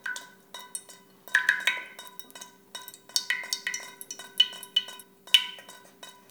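From 3.45 to 5.03 s, a second copy trails about 400 ms behind, a few dB quieter and starting abruptly: a doubled audio track, likely from a slower capture path.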